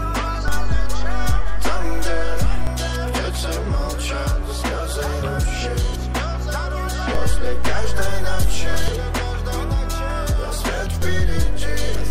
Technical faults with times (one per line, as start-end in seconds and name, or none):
0.48-2.67 DC step
7.15-8.88 DC step
11.02-12.11 DC step